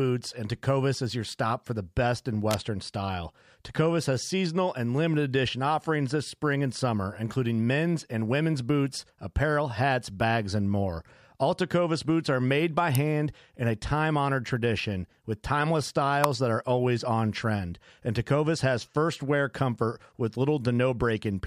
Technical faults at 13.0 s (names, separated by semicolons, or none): electrical switching spike